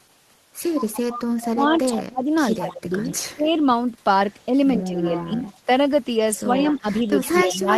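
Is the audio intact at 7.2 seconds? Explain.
No. At 7.2 seconds you're hearing an echo leak, running from 6.37 s to the end of the clip at 7.77 s. A delayed copy of the speech comes back about 104 ms behind the original, sitting around 15 dB below it, so it reads as a faint double. That most likely comes from a loudspeaker on one side whose echo canceller didn't fully scrub what its microphone picked up, so the leftover got sent straight back.

On top of that, there's speech suppressed in double talk from 6.39 s to the end. With both sides talking at once, the talker's level sags by up to roughly 15 dB, and the sound gets ducked rather than staying steady. The likely culprit is the same echo canceller: it couldn't tell the local talker apart from the returning echo, so it turned everything down together while the overlap lasted.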